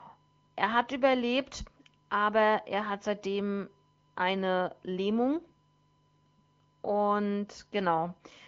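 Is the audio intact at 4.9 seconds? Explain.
No. At 4.9 seconds, as through the whole clip, a USB whine sits under the speech. It is a steady tone at 1 kHz, roughly 45 dB below the speech. Current drawn in 1 ms USB frames leaks into the audio through power or ground.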